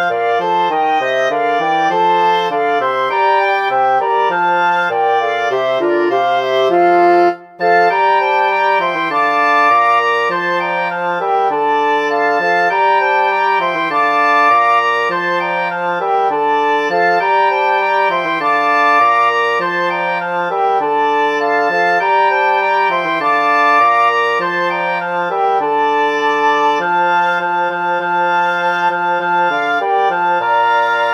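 No technical faults can be heard anywhere in the recording. The audio runs without any interruption, dropout, distortion or glitch.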